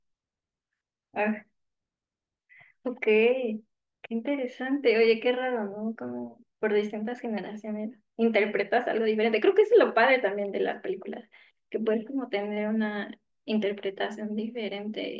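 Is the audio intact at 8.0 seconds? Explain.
Yes, the speech at 8.0 seconds is intact, with no dropout, click, distortion or other fault at that moment.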